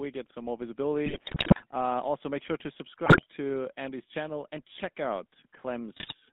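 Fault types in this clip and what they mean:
GSM full-rate codec: The whole recording has the buzzy, gravelly roughness of the original GSM voice codec. It rebuilds the vocal tract from a filter driven by sparse, regularly spaced pulses, which fits a 13 kbps full-rate stream. The damage is plainly audible. On a spectrogram, energy sits between about 200 Hz and 3.6 kHz with nothing above, and harmonics look smeared and grainy rather than clean.
GSM bit errors: Three bursts of corrupted decoding break the speech into squawks, pops and gargling. The first runs from 1.06 to 1.63 s, right after "get some more". The second runs from 3.06 to 3.24 s, after "make sure to". The third runs from 5.96 to 6.14 s. Flipped bits scramble the filter, pitch and gain values, so the spectrum bends and the level jumps abruptly. The waveform shows sudden spikes and chunks out of scale, and the spectrogram shows blotchy, misplaced energy there.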